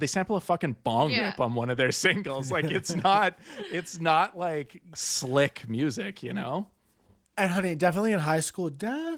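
No technical faults are audible.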